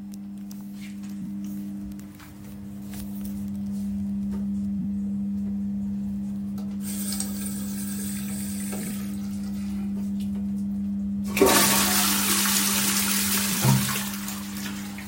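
Everyday sounds here carry two kinds of digital fault. Frames out of order occur at 1.21–1.27 s, 4.79–4.84 s and 13.52–13.58 s, where two adjacent blocks of about 23 ms are swapped, and at 8.81–8.91 s, where two pairs of frames totalling about 46 ms each trade places. Each spot plays as a brief garbled flutter. Unlike a dropout or a repeated frame, no time goes missing and nothing is doubled. The sound is just reordered. The block size fits a decoder's frame size. A bit error spike occurs at 1.92 s: a single sample jumps by a power of two and snaps back, giving one sharp broadband tick. It differs from the reordering because it is one isolated sample with no flutter around it, and from a mechanical or acoustic click because it has no relation to the surrounding sound.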